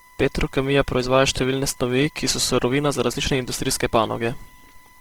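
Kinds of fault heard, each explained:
USB whine: a steady fixed-pitch tone at 1 kHz runs through the whole recording, roughly 30 dB below the speech, drawn as a flat horizontal line on a spectrogram.
Opus compression: speech sounds rough and grainy from heavy coding, likely Opus in CELT mode at a low bitrate; the spectrogram shows noise-filled bands with few empty holes.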